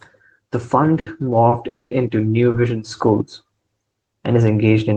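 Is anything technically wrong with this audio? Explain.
Yes. There are a few hiccups in the timing of this speech.

The short stalls from a late packet come at 0.99 to 1.08 s, 1.49 to 1.54 s and 2.51 to 2.56 s. A packet didn't arrive on time, the jitter buffer ran dry, and the receiver held the last bit of sound for about 70 ms in the first case and 30 ms in the other two. Nothing gets lost. You just hear a syllable drag on briefly with a faint buzz or dip, and then it carries on where it left off.

The bigger one is a call audio freeze from 1.68 to 1.93 s. The sound stops, and about 230 ms is filled in. Almost all of that, about 210 ms, is plain silence, with only a brief held-over trace at the start. The likely cause is packets getting held up in transit long enough to empty the buffer completely. When they show up, the speech resumes from the same point, so it's a pause added into the audio rather than a piece cut out of it.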